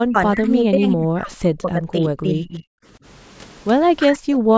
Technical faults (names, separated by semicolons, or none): speech suppressed in double talk